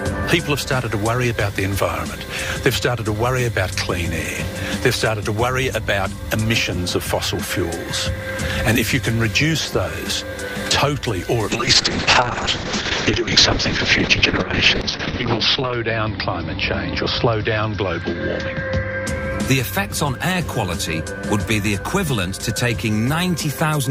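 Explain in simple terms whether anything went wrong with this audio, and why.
From 11.52 s to 19.13 s the sound goes through a call bitrate drop. The call suddenly had less network capacity, so the encoder squeezed the audio into far fewer bits. The sound turns rough and watery, and its top end is cut from about 20 kHz down to 6 kHz, which makes it muffled. It stays at its worst for about 4 seconds. Unlike dropped packets, nothing goes silent or skips. The sound keeps flowing, just coarser and duller, until quality returns.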